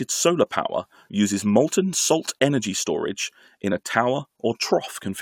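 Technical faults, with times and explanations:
No technical faults can be heard in the recording.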